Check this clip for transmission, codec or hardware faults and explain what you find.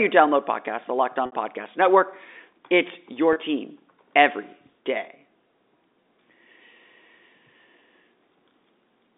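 Two transmission dropouts, both packet loss with pitch repetition, heard through G.711 telephone coding that limits the band to about 300 Hz to 3.7 kHz.

At 1.26 s (60 ms, which fits two lost 30 ms packets) and 3.33 s (30 ms, one packet), audio data never arrived. The receiver filled each gap by repeating the last pitch period and fading it, so the speech briefly holds on a buzzy, repeated tone.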